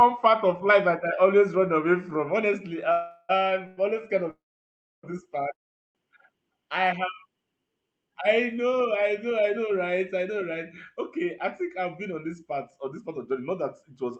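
Call audio freezes interrupt the speech at 2.92–3.31 s, 3.67–3.79 s, 4.31–5.05 s (just before "this part") and 5.53–5.97 s (just after "this part"). These were likely caused by delayed packets draining the jitter buffer. The last sound stretches into a brief fading buzz, and the two longer waits sink almost entirely to silence. Unlike a dropout, nothing is lost: the speech resumes exactly where it stopped, only later.

From 9.83 s to 14.04 s, a jitter buffer speed-up trims tiny pitch-period slices, about 150 ms in total. The speech runs about 4% faster at unchanged pitch, with no chipmunk-like shift, which separates it from a resampling error.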